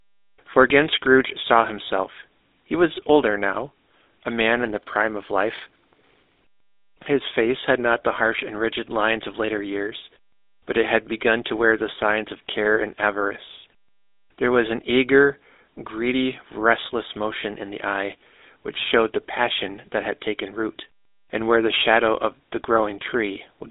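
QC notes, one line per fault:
Throughout, GSM full-rate codec: the speech has a plainly audible buzzy, gravelly roughness from a pulse-driven vocal-tract model, consistent with 13 kbps GSM full rate. Telephone bandwidth, roughly 300 Hz to 3.7 kHz, leaves nothing above 3.8 kHz.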